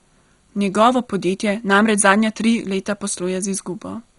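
Speech runs throughout with MP2 compression damage: nothing above 11.2 kHz, and what remains gurgles and grains as upper sub-bands flicker on and off under heavy quantisation, which fits about 56 kbps and is likely Layer II coding. A plain low-pass filter would leave it dull but clean, without that granular churn.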